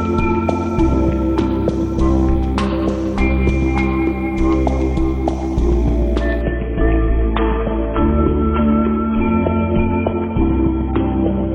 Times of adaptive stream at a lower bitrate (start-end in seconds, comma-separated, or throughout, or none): 6.42-11.54